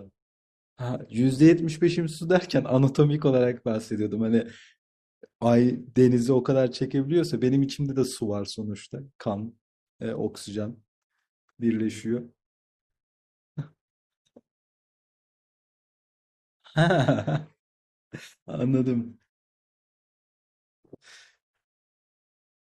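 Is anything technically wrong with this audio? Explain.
No, nothing technically wrong stood out on listening to this speech recording.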